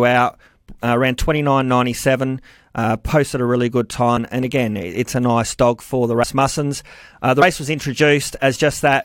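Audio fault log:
4.16 s, 6.23 s and 7.41 s, compressed frames skipped: the speech jumps ahead after "posted a really good" and "nice dog for the". The gaps, about 100 ms then 70 ms twice, fit whole 23.2 ms frames lost from playback.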